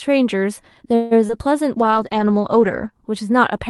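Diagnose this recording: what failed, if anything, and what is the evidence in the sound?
At the network stage, packets were likely delayed long enough to drain the jitter buffer. From 0.95 to 1.13 s the receiver extends the last sound as a fading buzz or hiss for about 155 ms. This is a call audio freeze: the speech then resumes where it stopped, delayed, with nothing lost.

Separately, 20 ms of the stream never reached the Opus decoder in time at 1.27 to 1.31 s. The concealment continues the preceding sound and blends back, heard as a brief smear or wobble. This is short concealed packet loss, with that fragment actually missing.

The congestion control cut the encoder's target, producing a call bitrate drop from 48 to 11 kbps between 1.78 and 2.97 s, lowest for about 1.1 s. Opus narrows the bandwidth from 12 kHz to 8 kHz and quantises coarsely, so the speech sounds muffled and rough.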